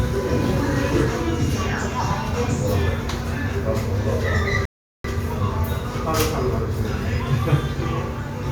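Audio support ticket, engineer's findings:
Sound drops to silence at 4.65 s, resumes at 5.04 s exactly where it left off, nothing skipped. Rebuffering stall: player buffer ran dry, playback paused about 390 ms awaiting more downloaded data. Component: client playback buffer / network delivery.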